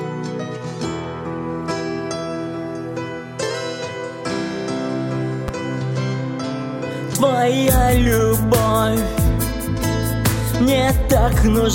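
At 5.48 s a single loud pop jumps out well above the level, likely a voltage spike from a plug or switch, with the sound continuing underneath.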